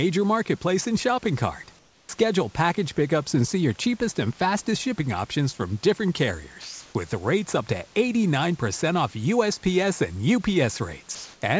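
Speech recorded over a call link, with nothing above 8 kHz, which fits a G.722 wideband codec. Twice the room's background, sitting about 33 dB below the speech, turns into a flat, textureless hiss. From 1.79 to 2.09 s it drops about 15 dB quieter for 300 ms, and from 11.15 to 11.42 s it runs about 2 dB louder for 270 ms. This is comfort noise in place of the background, likely because the sender paused transmission during a gap and the receiver synthesised a rough stand-in for the real room sound.

The first of those gaps also bites into the speech: from 2.02 to 2.09 s the returning speech begins hard, with its soft attack missing. That is an onset clipped by the voice detector. It likely reacted about 70 ms late, so those first moments were never sent and filler noise was played where they should have been.

At 6.62 s the speech gives way to steady noise for 330 ms, recovering at 6.95 s, and roughly 130 ms of actual speech disappears within that stretch. 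This is sound dropped by the voice detector, likely because it mistook quiet speech for background, stopped transmitting, and left comfort noise to cover the hole until it triggered again.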